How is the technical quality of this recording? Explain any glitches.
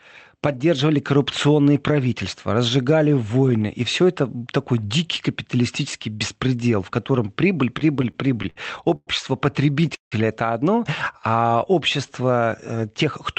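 The recording has several network-related glitches in its second half, heard through a call path that cuts everything above 8 kHz, which shows as a flat ceiling on a spectrogram.

From 7.79 to 8.58 s, just after "беспредел в котором прибыль", there are repeated stalls (stutter). The jitter buffer kept running dry, and the receiver stretched the last sound over short gaps, the longest 62 ms. The result is choppy, dragging audio. The waveform shows small smeared repeats.

At 8.96 to 9.09 s and again at 9.95 to 10.14 s, just before "это одно", the call audio freezes. This is likely from packets held up in transit. The last sound continues briefly, then fades, leaving gaps of 110 ms and 169 ms. A spectrogram shows a smeared tail followed by an empty band.

From 11.12 to 12.62 s, right after "это одно", a jitter buffer slow-down repeats single pitch periods to rebuild its reserve. The sound plays at about 89% speed at unchanged pitch and is drawn out by 175 ms. 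On a spectrogram, the harmonics look elongated.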